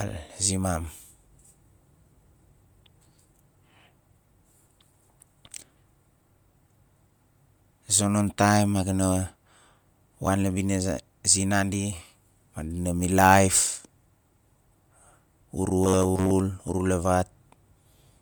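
Bluetooth LC3 compression runs through the whole speech clip. The speech is likely passing through an LC3 encoder at a rate that points to about 48 kbps with 10 ms frames. Plainly audible transform coding leaves a grainy, breathy edge on the voice, with nothing above 20.1 kHz.

Bluetooth LC3 compression runs through the whole speech clip. The speech is likely passing through an LC3 encoder at a rate that points to about 48 kbps with 10 ms frames. Plainly audible transform coding leaves a grainy, breathy edge on the voice, with nothing above 20.1 kHz.

Robotic sound from repeated short buffers appears from 15.84 to 16.31 s. Audio arrives too slowly, and the gaps are likely filled by looping the last chunk, which fits a buffer of roughly 10.7 ms. Most of that stretch becomes a rigid metallic buzz at 93.8 Hz.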